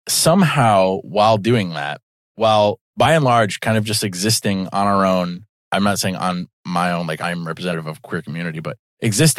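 A speech recording with two places where compressed frames were skipped, at 3.04 s and 7.72 s. At each point the decoder had nothing valid to play for whole frames, so the audio jumps forward: about 20 ms is lost at the first, which points to a single frame, and roughly 50 ms at the second, which fits about two frames.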